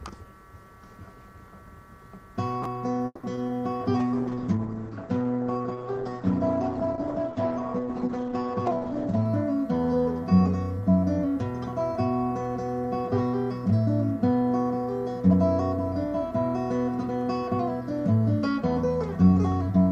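At 3.05 to 3.25 s the sound stalls in a call audio freeze. The last sound is stretched out as a fading buzz for about 180 ms, then 30 ms of silence. Delayed packets likely emptied the jitter buffer. Nothing is lost, but the rest now runs 180 ms late.

Short concealed packet loss follows at 3.35 to 3.39 s and again at 3.47 to 3.51 s. Each time about 20 ms of audio never arrived. The decoder covers the hole by extending the previous sound, so each spot is a quick smear or wobble.

From 4.0 to 9.31 s there is a call bitrate drop. The sound turns coarse and watery, and the top end disappears above 8 kHz, down from 20 kHz. This fits the encoder falling from 64 to 10 kbps. It stays at that floor for about 5.2 s before recovering.

From 13.65 to 15.30 s a jitter buffer speed-up occurs. The receiver trims small pitch-period slices repeatedly to shed excess buffered delay, roughly 150 ms in total. 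The audio plays about 9% fast at unchanged pitch and sounds rushed.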